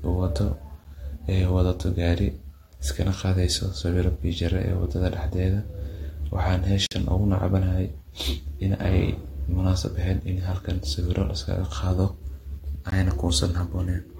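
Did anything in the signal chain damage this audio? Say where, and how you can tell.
Yes. Gaps between stream segments at 0.84 s, 6.86 to 6.91 s and 12.90 s cut hard-edged silences of 12, 49 and 18 ms into the speech, six seconds apart. At playback, segment time stamps don't meet, so the player fills each seam with silence.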